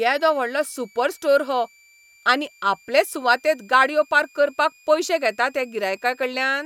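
A thin, high whistle sits under the speech for the whole clip, wandering in pitch between about 2.26 and 2.48 kHz, roughly 35 dB below the talker. This is switching supply whistle: a switching power supply has dropped into an audible burst mode or is beating against another supply, and the whistle's pitch drifts within that range.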